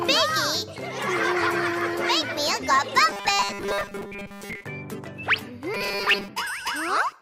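From 3.11 to 4.64 s and again from 5.74 to 6.28 s, robotic sound from repeated short buffers turns the audio into a rigid, metallic 200 Hz buzz. This is likely a 5 ms buffer repeating over most of the skipped audio. Unlike gaps or stutters, the sound never goes silent.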